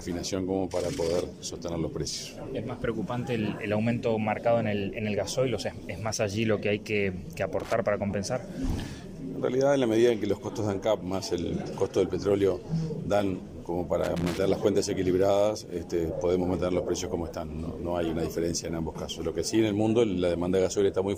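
At 7.60 s the audio breaks into loose connector crackle lasting about 0.13 s, and a second, longer burst follows from 14.04 to 14.39 s. A worn or dirty contact is repeatedly making and losing connection, so the signal is chopped on and off in quick succession and heard as irregular scratchy crackle. On a waveform each burst shows jagged, uneven dropouts and spikes; a spectrogram shows ragged broadband vertical streaks across those spans.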